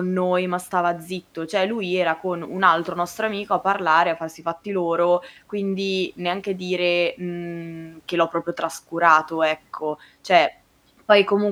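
Nothing in the speech stood out as a technical problem on listening.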